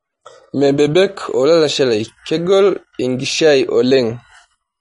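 From the start, the whole clip carries the sound of plainly audible lossy coding, most likely MP3 compression at a low bitrate in the region of 40 kbps. Nothing is present above about 10.6 kHz, where the encoder has cut the treble outright. With so few bits available, weak frequency lines drop in and out between frames, giving the speech a watery, swirling texture, while sibilants turn metallic and consonant onsets sound smeared.

Between 0.54 and 1.15 s the speech slows by 5.84% and drops about 104 cents, roughly a semitone, with speed and pitch falling together. Just before "olalashe lai kegol" it snaps back to normal rate. This pattern is the mark of a drift correction step: software reconciling two clocks likely changed the playback rate in a single jump to rebalance its buffer, then restored it once the buffer had settled.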